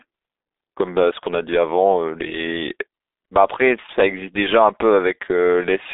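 A speech clip carried over the G.723.1 codec from start to finish. The sound is confined to a telephone band of roughly 250 Hz to 3.7 kHz, with nothing at all above 3.8 kHz, and the heavy coding damage leaves it muffled and hoarse with smeared consonants. A plain band-limited phone line would sound clean within that band; here the slow, coarse frame-by-frame voice modelling fits a very low bitrate around 6.3 kbit/s.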